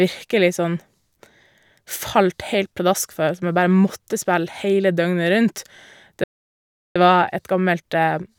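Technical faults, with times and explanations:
6.24–6.96 s, playback stall: the speech cuts out mid-flow and the output sits silent for about 0.72 s before sound returns. A gap this long points to the player likely starving for data or having its output thread blocked until it recovered.
6.96–8.39 s, time-compressed catch-up: after the stall the speech runs about 1.1 times faster to the end while pitch stays normal. The player is trimming its backlog by removing short slices and cross-fading the joins, which leaves the delivery hurried.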